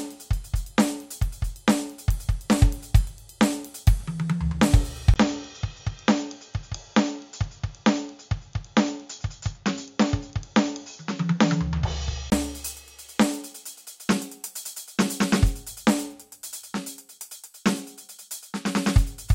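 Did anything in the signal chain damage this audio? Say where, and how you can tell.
Yes. From 5.14 to 12.32 s the music turns dull, with nothing above 7.1 kHz, a 20 ms gap at the switch and a faint new noise floor. This is likely an input switched to a poorer device. A spectrogram shows the top band sharply cut off across that span.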